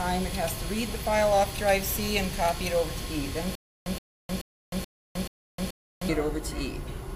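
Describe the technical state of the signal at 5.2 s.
At 5.2 s the signal is inside a stutter with silent gaps that runs from 3.55 s to 6.09 s. The likely cause is a stalled player or stream that replays its last fragment at each retry and then runs dry. The same 122 ms burst returns six times, once every 431 ms, with about 309 ms of digital silence between repeats. The audio that belonged in that span never plays.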